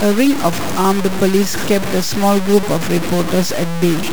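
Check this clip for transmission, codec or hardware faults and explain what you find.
The speech is grainy and harsh from start to finish, with a gritty distortion that rises and falls with the voice, and quiet stretches sputter or drop out rather than fading smoothly. That points to low bit depth without dither, likely a truncation to about 4 bits: each sample is cut down to one of very few steps, so the error tracks the signal and sits only around 10 dB below it.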